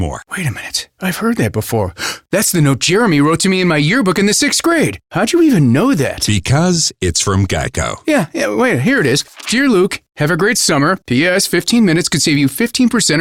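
No technical faults can be heard anywhere in the speech recording.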